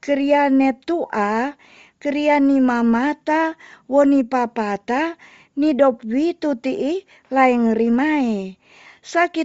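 Throughout the speech, the signal has likely passed through Bluetooth LC3 compression at a low bitrate, near 32 kbps with 7.5 ms frames. Much of the upper spectrum is discarded and refilled with noise, leaving a plainly audible breathy, grainy edge on the voice.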